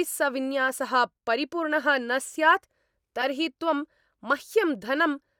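Corrupt frame decoded at 0.68 s and again from 3.21 to 3.24 s: in each spot a couple of compressed frames carried flipped bits, and the decoder played them anyway, so misread codes and gains threw energy into the wrong frequencies for roughly the length of those frames. Each is a short chirp or blip cutting across the speech. The first is fainter, peaking around -25 dBFS; the second is louder, around -15 dBFS.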